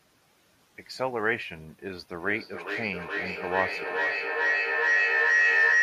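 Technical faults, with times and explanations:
2.13–5.83 s, feedback howl: a microphone picks up a loudspeaker on the same call, and each trip round the loop returns louder. It narrows to a tone around 2 kHz, repeating roughly every 400 ms, reaching about 6 dB above the speech until the end.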